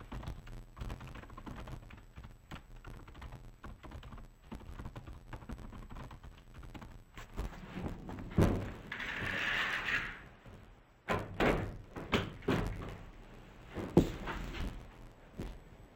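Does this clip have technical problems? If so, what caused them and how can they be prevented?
Yes. Interleaved audio read as planar runs throughout. The sound is dull and robotic, with a buzz near 86 Hz. That fits 512-sample blocks, about 11.6 ms each, whose alternating left-right samples were split into halves. Prevent it by matching the reader's channel layout to the source.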